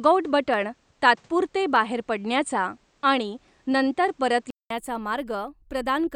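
Speech runs for the first 4.70 s through what is likely a poorer input device, such as a second microphone or a headset's call profile, before the system switches back. That device passes a narrower band and adds its own background noise, roughly 40 dB below the speech, so the opening section sounds narrower and noisier. At 4.70 s a gap of about 200 ms separates the two sources, and the level then shifts by around 5 dB as the fuller-band sound returns. Separately, the stream likely loses a handful of samples, about 0.1 ms' worth, at 0.54 s, 1.76 s and 4.95 s. Each loss makes the waveform jump straight to a later value. Far too brief to remove any sound, each is heard as a single sharp click and would show as a thin vertical line across the spectrum.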